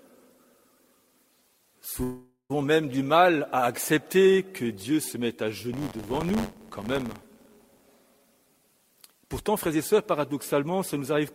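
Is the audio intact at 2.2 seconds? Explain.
No. A long network dropout runs from 2.03 to 2.52 s, covering 2.2 s. The sound breaks into a fading buzz or hiss that carries the last audio forward, then about 110 ms of near silence before the audio resumes. This is likely a stretch where no data reached the receiver: it padded the gap by extending what it last had, and roughly 460 ms of the original audio never returns.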